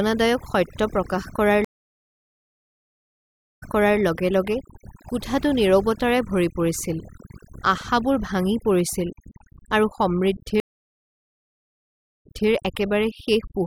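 Overdone noise removal affects the whole speech clip. The suppressor was set so aggressively that any frequency band near its noise estimate is pulled down or shut off, and the quieter parts of the voice are lost along with the noise. The background drops to near silence with small twinkling specks. On a spectrogram, the gaps between words are almost empty except for scattered isolated dots, and the speech harmonics appear ragged and broken.

A stream reconnect occurs at 1.65 s. The connection dropped, playback went silent for about 1.95 s, and a fresh decoder picked the stream up again around 4.0 s. It resumes 0.41 s earlier than where it cut off, so that stretch of speech is heard twice. A second stream reconnect at 10.6 s brings 1.62 s of silence, with audio returning near 12.49 s and repeating 0.26 s. In the waveform, each reconnect appears as a flat line followed by the signal fading back in.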